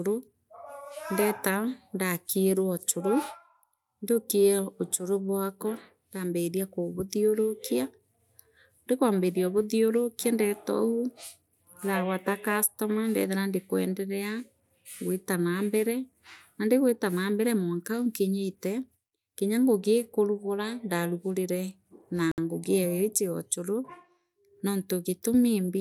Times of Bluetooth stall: 22.31-22.38

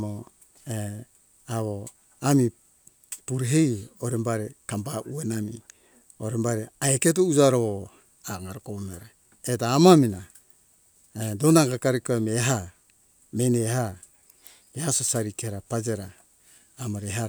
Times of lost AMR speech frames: none

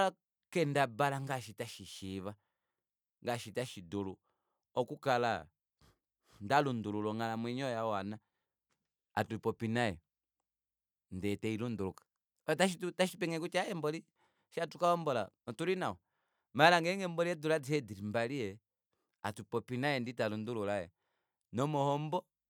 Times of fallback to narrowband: none

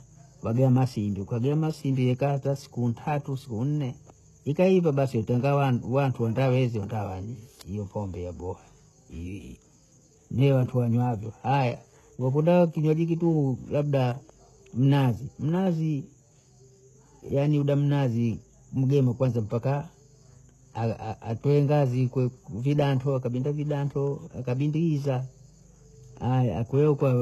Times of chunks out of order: none

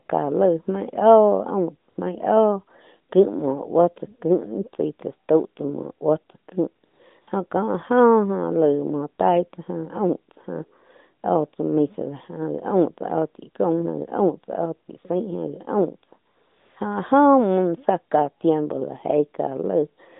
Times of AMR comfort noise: 0.06, 1.90-1.98, 6.86-7.28, 16.28-16.76

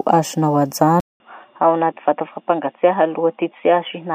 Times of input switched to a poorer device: 1.00-4.14

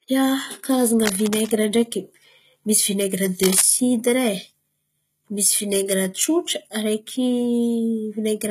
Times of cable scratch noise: 1.06-1.51, 3.43-3.62

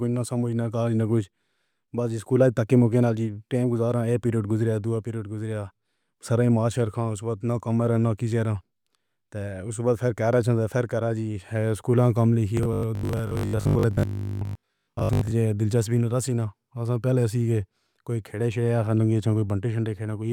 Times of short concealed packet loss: none

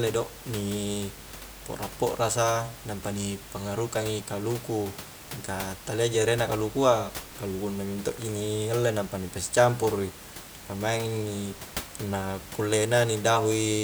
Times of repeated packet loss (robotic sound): none

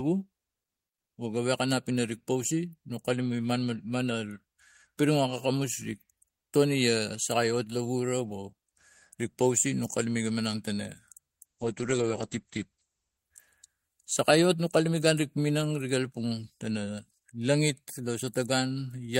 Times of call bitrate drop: 11.47-13.25

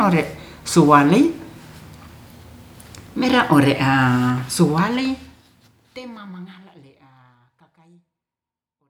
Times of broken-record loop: none

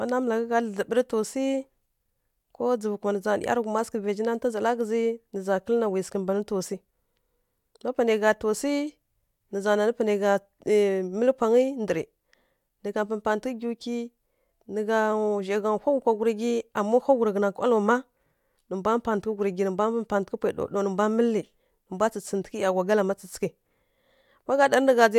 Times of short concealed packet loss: none

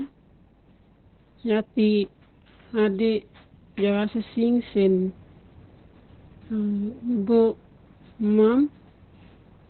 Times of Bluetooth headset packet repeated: none

